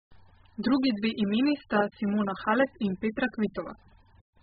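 Speech the whole way through, sounding dull and smeared, with nothing above 5 kHz and a warbly, fizzy edge, likely heavy AAC compression at a very low bitrate, around 8 kbps.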